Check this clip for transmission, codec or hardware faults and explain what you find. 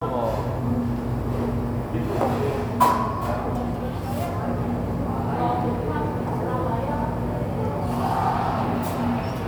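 Nothing wrong can be heard in this recording.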